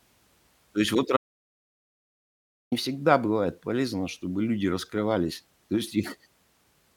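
Speech cuts abruptly to dead silence after "есть вот" at 1.17 s and returns at 2.72 s on "всегда бывает полезно чтобы": about 1.5 s of audio dropout to silence, likely a lost input link.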